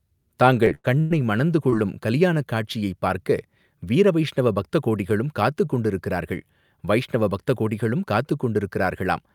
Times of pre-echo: none

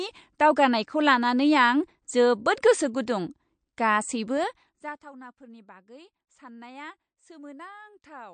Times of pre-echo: 2.62

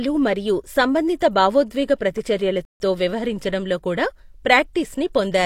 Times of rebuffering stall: 2.65-2.80

